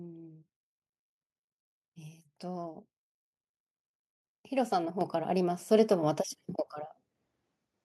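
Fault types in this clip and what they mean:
Microphone volume stepped up: call software raised input gain twice, so speech and background jump together, by about 6 dB then about 4 dB.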